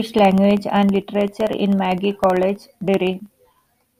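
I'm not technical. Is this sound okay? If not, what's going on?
No. From about 0.06 s to 3.90 s the speech carries a steady ticking, one tick every 0.064 s, roughly fifteen a second and around seventy in all. These are periodic USB or driver dropouts: something on the computer keeps briefly interrupting the audio connection, and each time a sliver of sound, well under a millisecond, is replaced by silence. Unlike crackle from a loose cable, the ticks are evenly spaced like a clock.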